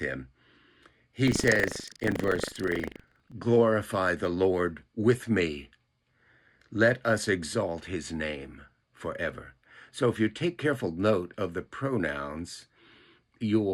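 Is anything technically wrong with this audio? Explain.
Yes. From 1.24 s to 3.35 s there is buffer tearing. The writing program and the playback hardware have drifted out of step, so each buffer period contains a small slice, roughly a tenth, of audio from about a tenth of a second earlier, joined with hard edges. The result is a rattling, robotic buzz at 25 Hz, present only where there is signal. On a waveform, abrupt discontinuities recur every 40 ms. A spectrogram shows vertical stripes at that spacing.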